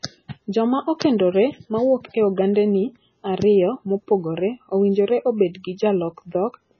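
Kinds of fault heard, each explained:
MP3 compression: The speech carries heavy codec damage all the way through. Weak frequency components drop in and out from frame to frame, giving a swirly, watery texture, with metallic chirps on s sounds and smeared onsets. This is likely MP3 encoding starved of bits, which fits a bitrate near 16 kbps. A spectrogram would show a flat ceiling at 7.1 kHz with nothing above it, and a speckled pattern of bins flickering on and off below it.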